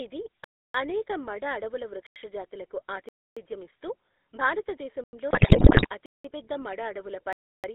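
GSM full-rate codec, throughout: the whole recording carries the buzzy, gravelly roughness of this early coder, which fits its 13 kbit/s rate. It rebuilds speech from a vocal-tract filter driven by a coarse, regularly spaced pulse train. That thin excitation is what makes voiced sounds grate. The band runs only from about 300 Hz to 3.6 kHz, so the sound is boxy and lacks any air.

Blocks of digital silence: the audio drops abruptly to silence from 0.44 to 0.74 s, 2.07 to 2.16 s, 3.09 to 3.37 s, 5.04 to 5.13 s, 6.06 to 6.25 s and 7.33 to 7.64 s. The gaps last between 93 and 311 ms. The output was likely left unfilled, and each hole cuts out and back with no fade in or out. The two 93 ms gaps fit a 4096-sample buffer and the 186 ms gap fits an 8192-sample one, which points to whole buffers going missing.

GSM bit errors, 5.31 to 5.87 s: corruption is heavy here, around one bit in ten flipped before decoding. 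Damaged filter, pitch and gain values throw each affected frame's spectrum and level off course. For just over half a second the sound turns into squawks, pops and gargling bursts.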